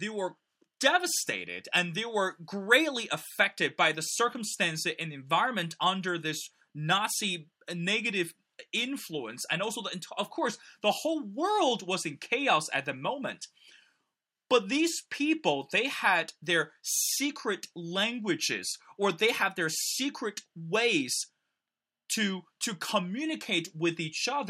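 Nothing technical goes wrong anywhere in this bit of speech, so there's really nothing to flag.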